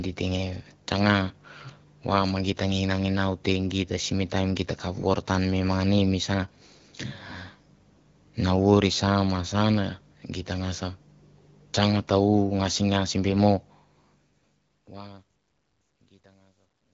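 Nothing goes wrong in this speech recording; the level just eases down in a gentle, deliberate fade over the last few seconds, ending at 16.9 s.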